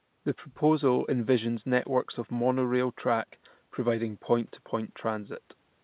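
Speech, with no technical faults to report.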